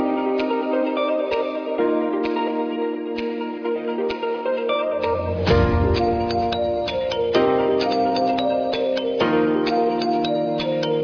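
From start to finish the audio carries aliasing. The sound was downsampled with no proper anti-alias filter, which fits a drop to around 11 kHz. Content above the 5.5 kHz fold point mirrors back down as unrelated, inharmonic tones, about 20 dB below the signal. Highs turn gritty and metallic, with energy packed right up to 5.5 kHz. Simple band-limiting would only sound dull, and codec artefacts would warble rather than add false pitches.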